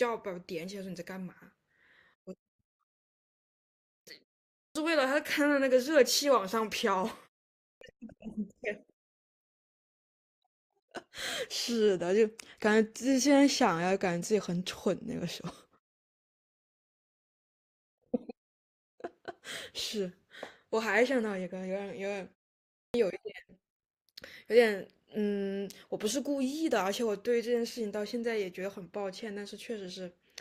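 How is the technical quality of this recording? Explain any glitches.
Speech onsets are cut off three times, at 4.52, 7.60 and 22.71 s. Each is a clipped start after a pause. After silences of 0.36 to 0.44 s, the output device sleeps and wakes late. About 0.21 to 0.23 s is lost. Words jump in abruptly, missing their first sounds.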